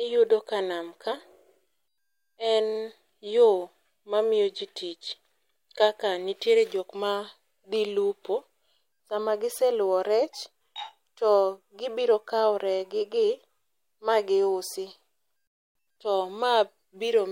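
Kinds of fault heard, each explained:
Clock slip clicks: faint single-sample ticks roughly every one and a half seconds from 0.82 s to 17.18 s, likely from two unsynchronised clocks drifting about 15 ppm apart.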